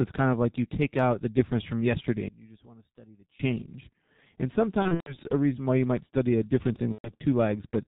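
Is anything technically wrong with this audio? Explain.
Yes, there are three kinds of fault in this speech clip.

The whole clip passes through the G.723.1 codec at about 6.3 kbit/s, and the damage is heavy. The codec rebuilds speech from a coarse vocal-tract model refreshed only every 30 ms, so the speech sounds muffled and hoarse and consonants smear together. On a spectrogram, energy stops abruptly near 4 kHz with nothing above it, and formants look blocky and step from frame to frame instead of gliding.

From 2.28 to 3.39 s, just after "the difference from yesterday", the speech suddenly drops by about 23 dB and leaves only a faint residue. The likely cause is one channel inverted: with one stereo side in reversed polarity, the material common to both sides cancels in a mono sum. The waveform shows a deep, flat-edged trough across that span, and the spectrogram shows the common energy nearly wiped out.

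VoIP packet loss concealed by the speech codec occurs twice. From 4.82 to 5.18 s, just before "a reason why you", roughly 180 ms of audio is missing, scattered over 240 ms, with the longest gap 120 ms. This fits about six lost 30 ms frames. From 6.92 to 7.12 s, right after "you might study a", about 120 ms is lost. In both places the decoder carries forward its last pitch and filter and lowers the gain step by step, so the sound becomes a stretched buzzy tone or coloured noise that fades. On a spectrogram these spans show flat, unchanging bands that weaken toward the end, and the waveform shows a shrinking envelope. The speech stays weak briefly after the gaps end.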